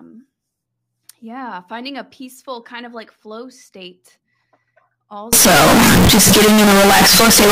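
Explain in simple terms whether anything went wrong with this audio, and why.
Something does go wrong, starting at 5.33 seconds and lasting to the end of the clip at 7.51 seconds. The speech suddenly turns very loud and harsh. The background noise becomes as loud as the talking. You can still follow the pitch of the voice. This sounds like a float read as integer fault. The likely cause is that audio saved as 32-bit float was read back as 32-bit integer. Each number was misread, so the wave turned almost square.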